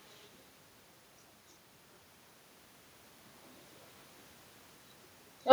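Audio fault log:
throughout: echo with no canceller. The speech is trailed, around a fifth of a second later, by a faint, thin copy about 68 dB below it, so low it barely registers. The far end's loudspeaker leaks into its microphone and nothing removes it.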